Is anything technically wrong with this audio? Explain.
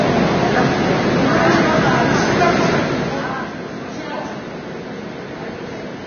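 Yes. Throughout the clip the sound carries heavy damage that most likely comes from Vorbis compression at a low quality setting, consistent with a bitrate near 20 kbps. With so few bits, the encoder cuts everything above 6.5 kHz and quantises the remaining upper band so coarsely that its fine detail turns into noise of similar energy. The result is dull, band-limited audio with a hissy, grainy top end, roughened tones and smeared attacks.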